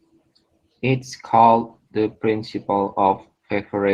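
From start to finish the speech carries Opus voice compression, and it's plainly audible: a slightly hoarse, robotic edge from the coarsely coded low band, with a top band layered above 8 kHz. That hybrid sound points to something around 16 kbps.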